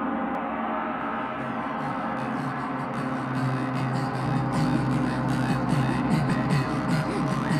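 Two brief blips at 0.35 s and 6.30 s point to damaged data in a compressed stream, where corrupted bytes make the decoder misread a frame and resync.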